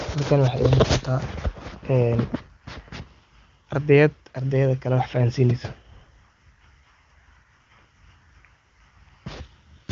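No faults: the speech carries the band limit of an AMR wideband (HD Voice) link, nothing above 7.4 kHz and codec damage faint at most, which points to the codec's top rate.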